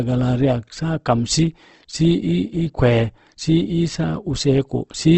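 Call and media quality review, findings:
Whole clip: rough, grainy speech texture, hard band limit at 8.2 kHz. Likely Opus compression, CELT mode, consistent with about 16 kbps. Starved bands are refilled with folded copies and noise, so tonal parts turn coarse.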